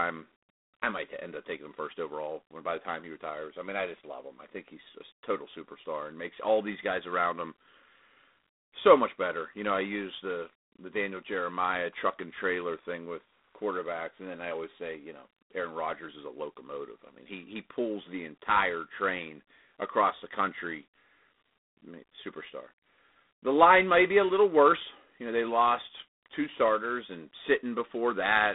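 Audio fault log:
throughout, G.726 ADPCM: speech carries a harsh, rasping hiss that rises and falls with its level, consistent with coarse 24 kbit/s difference coding. The band runs about 200 Hz to 3.7 kHz, with nothing above 3.8 kHz. Unlike MP3 artefacts, there is no swirling or warbling.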